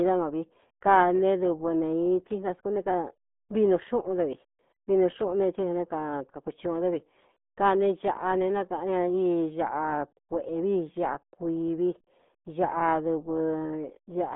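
Throughout, the speech sounds muffled and gargly, with nothing above about 3.8 kHz and a narrow band of roughly 200 Hz to 3.6 kHz. The heavy smearing is the RealAudio 14.4 codec at work, consistent with its 8 kbit/s dial-up-era coding.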